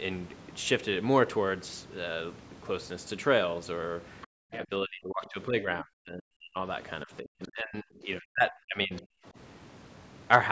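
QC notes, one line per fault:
4.22–4.27 s, 4.52–4.56 s, 7.43–7.48 s, 8.96–9.02 s, other side's voice leaking through: brief scraps of a second voice appear under the talker, at about 25, 20, 30 and 25 dB below the speech. These are likely loudspeaker echo that the canceller left in, an added voice rather than a loss of level.
4.27–4.32 s, background gated by the echo canceller: straight after the first leak, the room sound drops by about 40 dB for roughly 50 ms and then returns. The canceller clamped the microphone while the loudspeaker played. Only the background dips; no second voice is added.
4.50–6.59 s and 7.05–9.37 s, speech suppressed in double talk: the talker's own voice dips by about 40 dB in pieces, adding up to around a second and a half in each stretch. This is likely the canceller turning everything down while both sides were talking. Unlike the gating at 4.27 s, this hits the speech itself.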